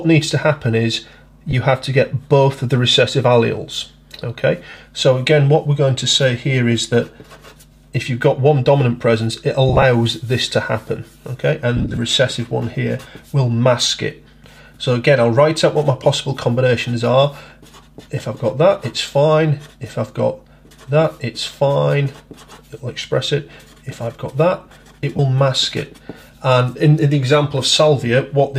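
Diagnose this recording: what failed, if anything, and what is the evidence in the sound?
Codec stage: lost LE Audio frames at 1.51, 4.70, 9.69–9.83, 11.77–11.97 and 25.17 s. LC3 concealment repeats spectra with random signs, leaving smeared noisy spectrogram patches.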